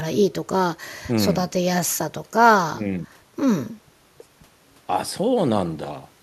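No technical faults occur at any point in the audio, so there are none to describe in time order.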